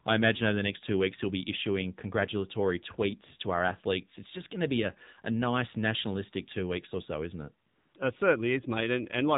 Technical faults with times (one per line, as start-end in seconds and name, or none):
0.00-9.37 AMR narrowband mobile codec
7.68-7.94 AMR comfort noise